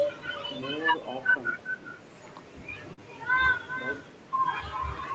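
Speech runs through a call with echo with no canceller: every phrase returns roughly four tenths of a second later, about 12 dB quieter and thinner, a distinct delayed copy rather than room reverberation. At 2.93 to 3.01 s, short concealed packet loss replaces 40 ms with extrapolated sound, a brief smear that sets it apart from a clean dropout to silence. Nothing reaches above 8 kHz, which fits the call's microphone processing and bandwidth.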